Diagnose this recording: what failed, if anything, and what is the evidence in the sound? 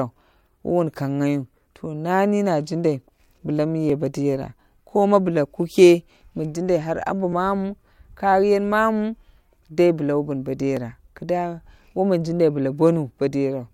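The fault sits at the driver and buffer stage: there's a regular click running through the speech, starting at 0.48 s and recurring every 3.44 s or so, about four in all, with the last near 10.77 s. That steady spacing is the giveaway for clock drift buffer slips. Two devices are likely running on separate clocks a few hundred ppm apart, so the buffer creeps until a few dozen samples get dropped or repeated, and each slip clicks.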